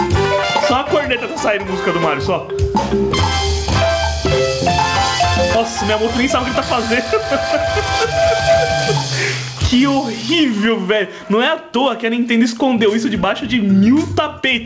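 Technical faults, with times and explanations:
Throughout, gain pumping: the gain swings by about 20 dB, pulling loud and soft parts closer in level, likely from input gain set far too high with a fast limiter. The waveform looks flattened.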